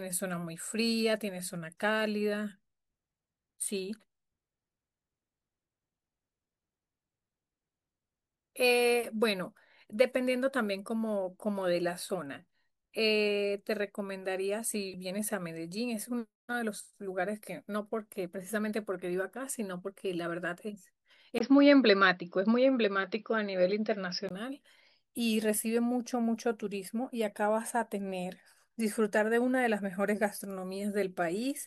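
At 21.38 s the speech suddenly goes dull and a bit boxy, with a brief 20 ms gap right at the changeover, and it clears up again at 24.31 s. That's most likely the input switched to a poorer device partway through. Nothing comes through above 5.7 kHz in that stretch, the level shifts by roughly 5 dB, and a faint new noise floor creeps in, sitting well below the speech.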